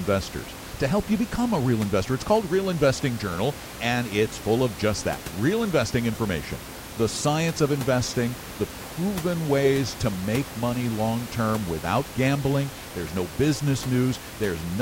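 No technical faults can be heard in this recording.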